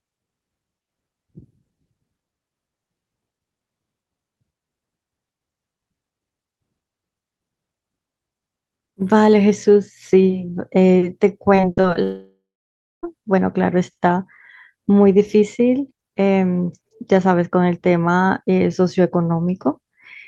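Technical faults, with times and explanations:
11.55–11.97 s, repeated packet loss (robotic sound): choppy stutter from five brief gaps, longest 39 ms, each patched by stretching the preceding sound, covering 28% of the stretch.
12.03–13.05 s, long network dropout: the sound smears into a fading buzz, then 0.6 s of silence, returning with about a second missing, likely from arriving audio stopping entirely.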